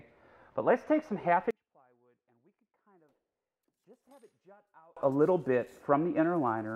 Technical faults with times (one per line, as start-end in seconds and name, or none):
1.51-4.97 one channel inverted